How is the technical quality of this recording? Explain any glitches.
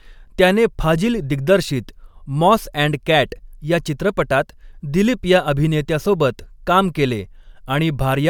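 No audible glitches or faults.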